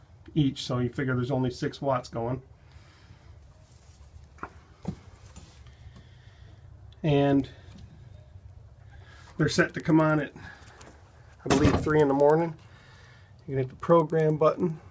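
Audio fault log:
7.3 s to the end: resampler restarted on every block. From here the sound carries a steady tick 10 times a second, so one every 100 ms, fitting a 48 kHz to 16 kHz conversion done in separate 100 ms chunks. Each chunk was converted as if it stood alone, so the filter saw silence or the wrong samples at the edges instead of the real neighbours. That leaves a small error at every seam, heard as ticks that follow the signal and vanish when it does.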